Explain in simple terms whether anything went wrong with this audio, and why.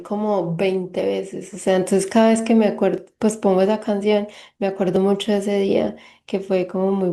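Overlap between stream segments causes small gaps at 0.99, 2.98 and 4.96 seconds in this speech. The audio was delivered in chunks about 2 seconds long. Where two chunks' time stamps overlapped, the player trimmed the supposedly doubled part. That sound wasn't actually duplicated, so 5 to 14 milliseconds of real speech were lost each time and the waveform jumped. You hear a tiny skip, repeating roughly every 2 seconds at the chunk boundaries.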